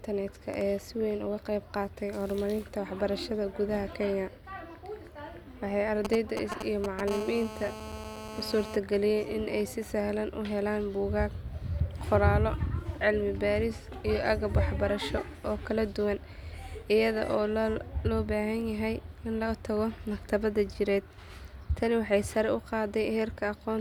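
From 6.05 to 7.10 s come GSM signalling bursts: a nearby 2G phone exchanging short groups of transmissions, which the audio circuit rectifies. They gallop as dit-dit-dit ticks and brief 217 Hz buzzes, nearly as loud as the speech, broken up rather than continuous.

From 7.11 to 8.76 s, just before "in ay si sahlan", this becomes GSM phone buzz. The phone is now in a call, pulsing steadily 217 times a second, giving an unbroken, raspy, harmonic-rich buzz about 10 dB below the speech instead of galloping clusters.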